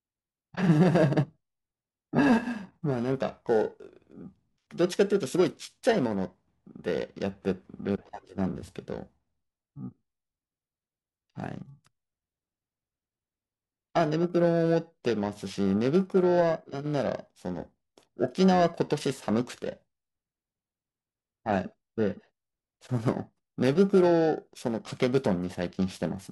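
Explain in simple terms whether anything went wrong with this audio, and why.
Periodic clock jitter runs throughout: the converter's timing wobbles roughly a thousand times a second, giving the speech a rough, metallic edge.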